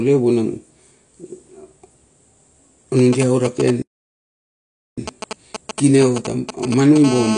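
AAC compression runs through this whole speech recording: nothing survives above about 10.1 kHz, and the remaining spectrum sounds dull and smeared, with a fizzy, warbling edge on sibilants. This is likely low-bitrate AAC-LC quantising its frequency lines coarsely against a hearing model, which fits a rate around 32 kbps. GSM signalling bursts appear from 2.99 s to 6.98 s as a galloping pattern of brief raspy buzzes at a 216.7 Hz repetition rate, roughly 10 dB below the speech. A nearby 2G phone is exchanging short groups of radio bursts with the network, and the audio circuitry rectifies them into sound. A playback stall cuts the audio from 3.82 s to 4.98 s, leaving about 1.15 s of silence in mid-flow before the sound resumes. The likely cause is the player running out of buffered data or being blocked until it recovered. GSM phone buzz takes over from 7.04 s to the end, a hard, harmonic-rich 216.7 Hz rasp about 8 dB below the speech. 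Here the phone has entered a call and transmits continuously in its 217-per-second burst cycle, which the circuit rectifies into a steady buzz.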